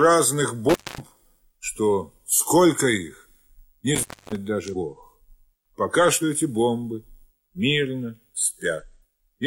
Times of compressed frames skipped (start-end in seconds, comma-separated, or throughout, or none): 4.69-4.75, 6.18-6.22, 8.78-8.84